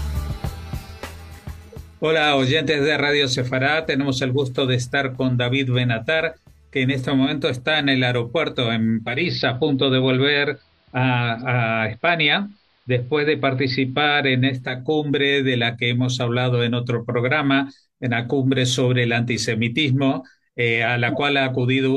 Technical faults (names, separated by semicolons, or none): digital radio blending to analogue